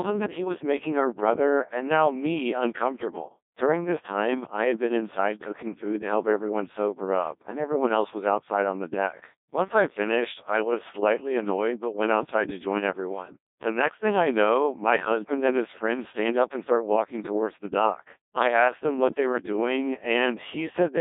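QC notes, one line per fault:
Throughout: Codec 2 vocoder. The whole clip has that robotic, buzzy quality you get when speech is rebuilt from a handful of parameters instead of the actual waveform. Pitch, voicing, energy and a rough spectral envelope come through, and the decoder resynthesises everything from sine waves. Damage is heavy, which fits the 1.2 kbit/s mode. The band sits roughly 250 Hz to 3.7 kHz, with nothing above 3.8 kHz.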